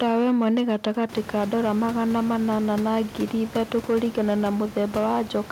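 Hard clipping runs the whole way through: the speech drives some stage about 4 dB past what it can pass, so a small fraction of the peaks get sliced flat, and those squared-off tops throw up high harmonics you hear as crackle on loud syllables. The room noise that rises around 1 s is just the room.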